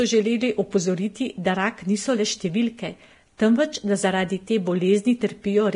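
Throughout, the speech shows heavy damage, most likely from Vorbis compression at a level that fits a 32 kbps rate. Nothing remains above 10.6 kHz, and the treble beneath turns to grainy hiss, unlike the clean dullness of a plain low-pass filter.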